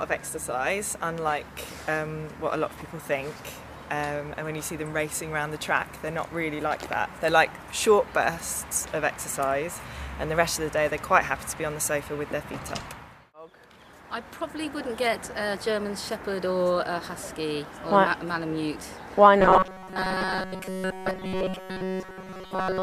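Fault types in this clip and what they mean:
Robotic sound from repeated short buffers: from 19.4 s to the end the sound turns rigid and metallic, locked to a buzz near 188 Hz, likely from a roughly 5 ms chunk replayed again and again, filling most of that stretch while fresh audio is skipped.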